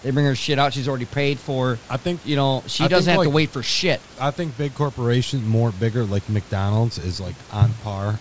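No technical faults are audible.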